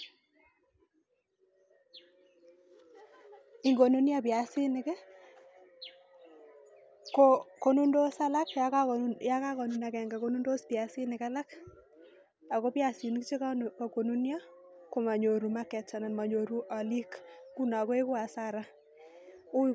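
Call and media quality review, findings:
No faults found in playback.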